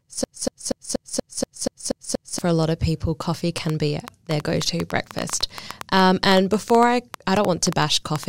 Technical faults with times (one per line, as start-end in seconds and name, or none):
0.00-2.39 broken-record loop
3.58-8.24 train of clicks